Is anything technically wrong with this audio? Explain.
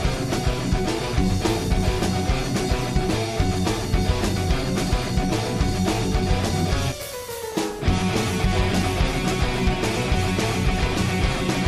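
Yes. Periodic USB or driver dropouts run from 6.92 to 9.13 s. A stalled bus or driver blanks about 2 ms every 0.1 s. This makes regular ticks.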